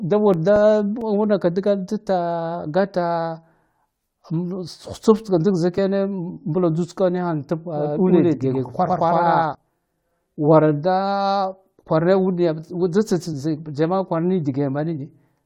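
A speech recording with three separate faults. From 0.34 to 1.46 s there are six CD scratch ticks, short regular clicks or dropouts each lasting a few milliseconds at most. They come from a surface blemish that passes the laser once per revolution and corrupts more data than the error correction can recover, so the player patches each damaged stretch by interpolating or muting it, leaving a periodic tick. At 5.75 to 5.78 s, compressed frames are skipped: the audio jumps forward by about 20 ms, because frames were lost from the file or rejected as damaged by the decoder. From 7.75 to 9.55 s the audio is a doubled track. A second full-band copy sits around a tenth of a second behind the first at roughly the same level, with no reverberant tail or room colouring, and it begins and ends abruptly at those times. This is likely the same signal reaching the mix twice, either through a second capture path with extra latency or through an edit that left two misaligned copies on the timeline.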